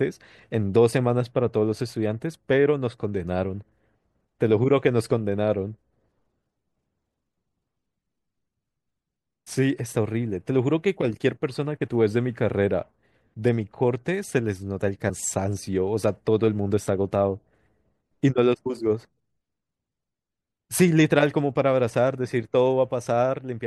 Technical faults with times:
15.09 compressed frames skipped

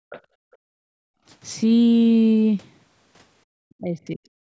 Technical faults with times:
0.00-1.25 background gated by the echo canceller
0.10-0.21 other side's voice leaking through
3.58-4.50 speech suppressed in double talk

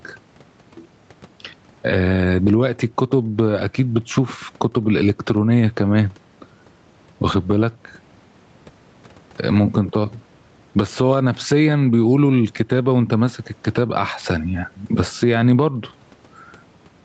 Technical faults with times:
0.00-17.04 gain pumping

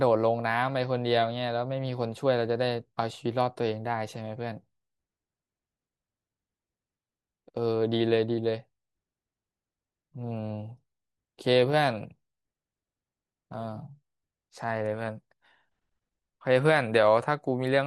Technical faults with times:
none

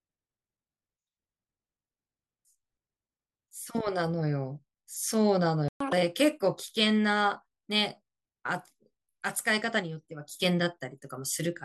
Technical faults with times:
5.68-5.80 playback stall
5.80-5.92 catch-up at higher speed

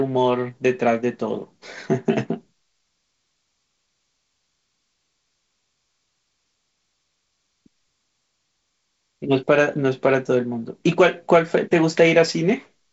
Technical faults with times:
none

